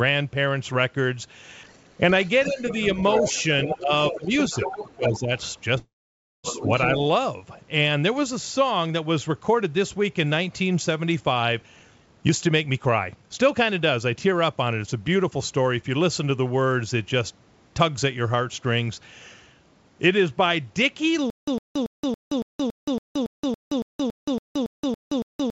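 From 2.25 to 6.92 s, other side's voice leaking through: a second voice sits roughly 10 dB under the speech, likely left in by an echo canceller that missed part of the loudspeaker feed. On a spectrogram, its harmonics overlap the main ones.

Within that stretch, the main speech is suppressed in double talk at 2.46–2.63, 2.95–3.25, 3.67–4.35, 4.66–5.31 and 6.59–6.64 s. The voice dips by roughly 5 to 15 dB, likely because the canceller turned everything down while both sides spoke. These show as notches in the waveform envelope.

From 5.78 to 6.47 s comes a call audio freeze. The last sound buzzes and fades into about 0.55 s of silence, likely from delayed packets draining the jitter buffer. Speech then resumes with nothing lost, leaving a flat gap in the waveform.

From 11.62 to 15.83 s, a jitter buffer speed-up plays the speech at 116% with unchanged pitch, trimming about 0.7 s. It sounds hurried, and syllables appear compressed on the spectrogram's time axis.

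From 21.30 s to the end, a stutter with silent gaps repeats a 106 ms burst every 280 ms, with 174 ms of digital silence between. This is likely a stalled stream replaying its last fragment, visible as identical blocks separated by flat lines. Throughout, the G.722 call path leaves nothing above 8 kHz on the spectrogram.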